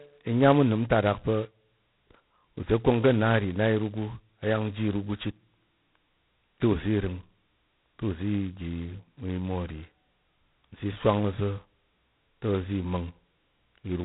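Speech throughout carries G.726 ADPCM damage: a harsh, rasping hiss that rises and falls with the speech level, heavy enough to fit the 16 kbit/s mode, where very few bits per sample code the prediction error. Nothing passes above about 3.9 kHz.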